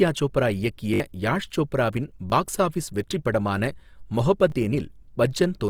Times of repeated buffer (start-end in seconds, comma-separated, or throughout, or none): 0.94-1.00, 2.30-2.32, 4.50